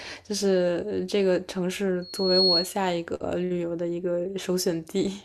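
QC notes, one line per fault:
2.02–2.72 s: loudspeaker feedback squeal. A 4.3 kHz tone swells over roughly 0.4 s to about 5 dB above the speech, because the microphone is re-amplifying the loudspeaker's output. At that one frequency the loop gain passes unity, so the tone feeds on itself until the amplifier limits it or the loop is broken.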